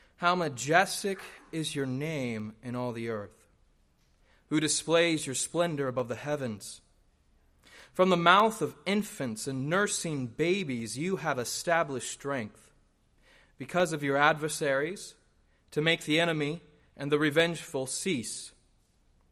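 Two devices on separate clocks, likely drifting a few hundred parts per million apart, make their shared buffer drop or repeat a handful of samples. These clock drift buffer slips recur every 0.6 s from 0.60 s to 19.20 s, each a brief click.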